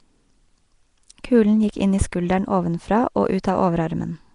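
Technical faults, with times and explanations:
Throughout, Nellymoser compression: the speech carries a rough, grainy hiss around it and a smeared, watery blur, plainly audible the whole way, with nothing at all above about 10.6 kHz. That's likely the old Flash microphone codec, Nellymoser Asao, at a rate that fits roughly 44 kbps. It spends a tight, fixed bit budget on short blocks, so quiet bands get swapped for noise, which gives the fizz, and block-to-block detail gets smudged.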